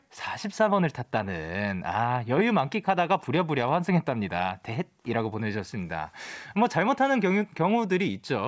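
No technical faults are audible.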